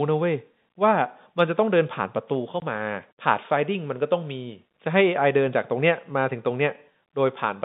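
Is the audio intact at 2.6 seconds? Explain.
No, there's a gap at 2.6 s: packet loss filled with silence. About 20 ms of audio, which fits a single lost packet, was replaced by dead silence, so the speech drops out abruptly with hard edges.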